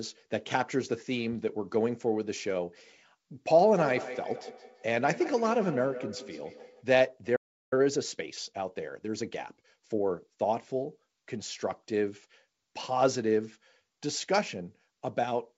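From 3.77 to 6.89 s a feedback echo between two devices returns the speech roughly every 150 ms, thinner and ringing, peaking about 11 dB below the speech. A second device in the room is replaying the call into a microphone whose echo canceller cannot remove it. At 7.36 s a playback stall cuts the audio to silence for 0.36 s, likely because the player's buffer ran dry or its thread was blocked. From 7.73 to 10.09 s a time-compressed catch-up plays the speech 1.15 times faster at its normal pitch. Small cross-faded cuts drain the backlog. Throughout, the call path's band stops at 7 kHz.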